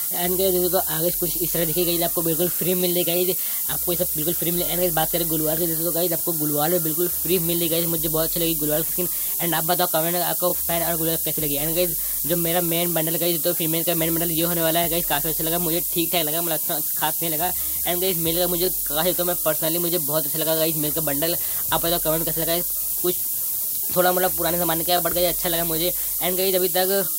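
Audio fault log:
Throughout: low bit depth with noise shaping. The audio is quantized to just 4 bits, and the rounding error is pushed upward in frequency, producing a steady, thin hiss climbing strongly toward the top of the band, roughly 5 dB louder than the signal itself.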